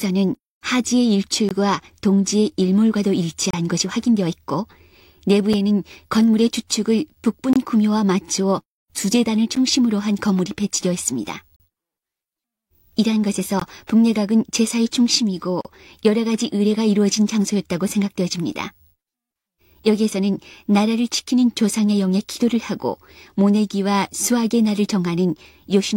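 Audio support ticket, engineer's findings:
Gap between stream segments: timestamps misaligned at 2 s segment boundaries, and the player pads the holes with silence. Hard-edged dropouts at 1.49, 3.51, 5.53, 7.53, 11.56, 13.60 and 15.61 s, lasting 5 to 37 ms. The timeline is stretched and no audio is lost.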